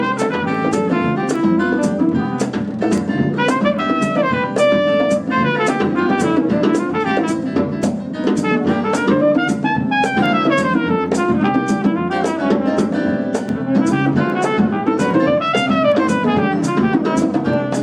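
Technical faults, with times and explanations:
0.55–17.54 s, word clock ticks: around twenty sharp ticks roughly every 0.7 s, as unlocked clocks about 30 ppm apart slip a sample.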